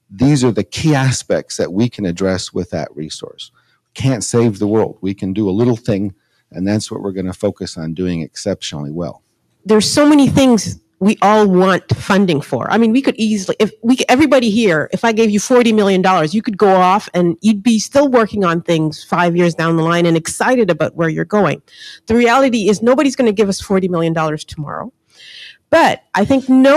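Sound cut by the noise suppressor, 3.49 to 3.73 s: misjudged as noise, the sound sinks by up to about 18 dB for roughly 150 ms.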